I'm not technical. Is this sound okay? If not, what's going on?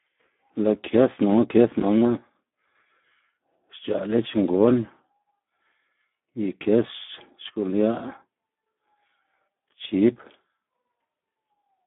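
No. Throughout, the speech carries damage from the Speex codec, an old internet-calling voice compressor. It sounds hoarse, buzzy and somewhat robotic, and nothing above about 3.8 kHz survives. A plain phone line would sound thin but clean. Here the voice itself is roughened.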